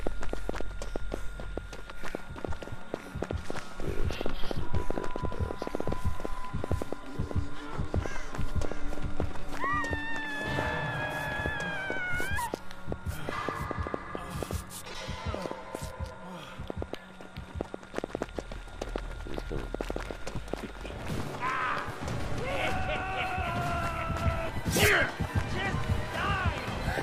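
From 0.07 to 20.55 s, a train of clicks pops irregularly, about 3.8 per second, roughly 15 dB above the sound. Likely nearby interference.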